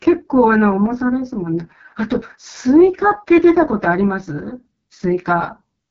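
From start to finish the speech carries AMR wideband (HD Voice) codec damage, and it is heavy. The rough, raspy texture fits the lowest AMR-WB mode, 6.6 kbit/s, where the pulse-driven vocal tract model is too coarse to follow the voice cleanly. Above 6.4 kHz the codec substitutes shaped noise for real detail. A spectrogram shows smeared, grainy harmonics, a hazy noise band at the top, and nothing above 7.4 kHz.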